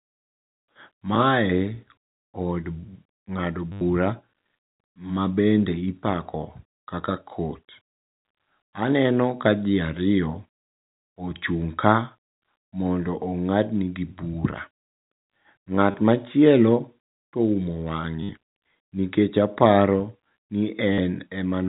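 Speech over a telephone-band G.711 path carries short robotic stutters at 3.72–3.81 s, 15.91–15.94 s, 18.23–18.29 s and 20.93–20.98 s. This is packet loss with the last packet repeated. Gaps of 30 to 90 ms were filled by replaying the last packet, and the buzz fits 10 ms packets at 100 Hz.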